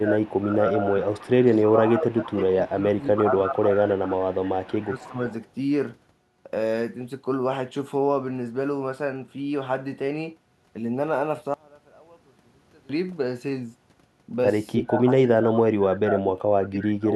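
Echo leak appears at 0.0–0.4, 1.01–1.69, 2.67–3.05, 3.91–4.14 and 4.8–5.32 s: a faint copy of the far talker trails 311 ms behind, roughly 20 to 35 dB under the speech. The likely cause is an echo canceller on a loudspeaker end that left some of its microphone pickup in the return path.

Speech suppressed in double talk overlaps this from 0.0 to 0.96 s and 1.67 to 5.18 s. The talker dips by up to about 15 dB in patches while the other side speaks, likely because the canceller attenuated both voices when it couldn't separate them. It returns from 14.74 s to the end with much deeper cuts, near 35 dB.

One channel inverted, from 11.54 to 12.89 s: the sound drops by 28 dB to a faint residue. The likely cause is one stereo channel flipped in polarity, so their shared content cancels in the mono sum.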